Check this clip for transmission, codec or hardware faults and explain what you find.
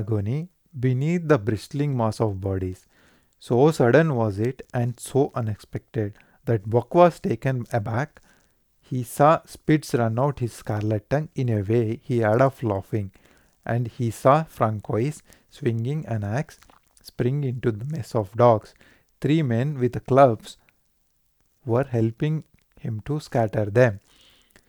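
Nothing wrong turned up here; the speech comes through steady and intact with no transmission, codec or hardware trouble to point to.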